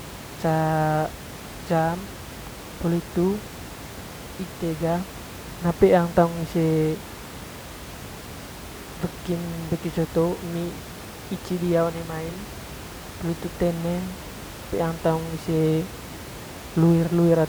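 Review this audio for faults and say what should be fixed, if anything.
Nothing here needs fixing; the only thing underneath the speech is a bit of ordinary room noise sitting about 15 dB below it, which comes from the recording space rather than the system.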